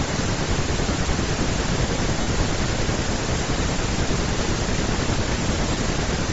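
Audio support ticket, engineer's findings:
Speech, full length: breathy, grainy top end on every voiced sound, with the upper band thinned out and replaced by noise-like texture. Likely Bluetooth LC3 compression at a low bitrate, around 32 kbps with 10 ms frames. Encoder zeroing high-frequency coefficients, decoder noise-filling the gaps. Codec damage plainly audible throughout.

2.21–2.27 s: 60 ms dropout heard as a hissy smear, tonal content lost. Lost LE Audio frames, about six 10 ms frames. LC3 concealment repeating the last spectrum with randomised signs, then fading.

5.39–5.41 s: shorter 20 ms smear. Lost LE Audio frames, about two frames, concealed the same way.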